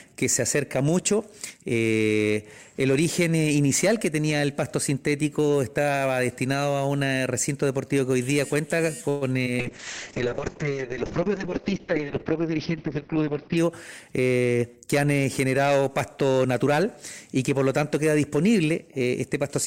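The audio carries four call-transport faults packed into the middle of the recording. From 9.09 to 9.23 s a call audio freeze holds the sound for about 120 ms: the last sound is stretched into a fading buzz or hiss, then playback resumes where it left off with nothing lost, most likely because packets stalled in transit and the jitter buffer ran dry. Between 9.45 and 9.55 s a short concealed packet loss leaves a brief smear where roughly 20 ms of audio never arrived and the receiver extrapolated from the preceding sound before blending back into the real signal. At 9.60 s a call bitrate drop takes the encoder from 128 kbps to 6 kbps for about 4 s, until 13.63 s, and the audio band narrows from 20 kHz to 6 kHz, so the sound turns muffled and coarse. Overlapping its end, a jitter buffer speed-up from 13.21 to 14.86 s plays the audio about 7 percent fast at unchanged pitch, as short pitch-period slices totalling around 150 ms are cut to drain excess buffered delay, giving a slightly hurried feel.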